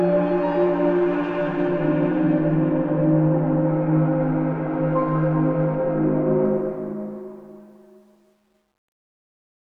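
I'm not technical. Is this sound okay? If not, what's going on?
No. The fade-out that starts near 6.5 seconds has truncation distortion. The volume was lowered without enough detail kept, which fits about 10 bits. From 7.47 to 9.62 seconds, the quiet tail turns gritty.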